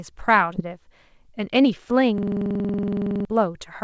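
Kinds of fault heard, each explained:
Skip ahead: At 0.56 s the speech lurches forward, and the two sides of the jump, which settles by about 0.70 s, are butted almost directly together with no audible gap. Roughly 0.4 s of speech simply never plays. A stretch of audio was dropped, either lost in transit or discarded by the jitter buffer as it overflowed, while later audio was already queued, so playback resumed from the newer material.
Jitter buffer speed-up: From 1.14 s to 1.91 s the speech runs slightly faster, at about 104% of normal speed, yet its pitch stays unchanged. About 40 ms is shaved off in total. The jitter buffer had built up more delay than it aims for, so the receiver trimmed many tiny slices, each one or a few pitch periods long, in quick succession to catch up without shifting pitch.
System hang loop: From 2.18 s to 3.25 s a single 46.44 ms fragment repeats exactly 23 times, producing a rapid mechanical stutter at 21.5 Hz, close to a coarse buzz. 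The loop length fits a 2048-sample buffer. The computer or audio driver froze while the sound hardware kept cycling through the same ring buffer, replaying its stale contents. Roughly a second of real speech is lost.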